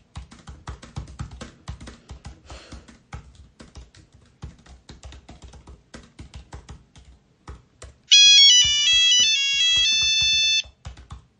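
An everyday sound recording, with plainly audible codec damage throughout: dulled treble, watery swirling and smeared attacks. The likely cause is MP3 compression at a low bitrate, around 40 kbps. Pre-echo sits at 8.08 to 8.11 s, where a hiss about 19 dB louder rises 32 ms before a sharp attack. The encoder never switched to short blocks, so quantisation noise spread across a long 52 ms window.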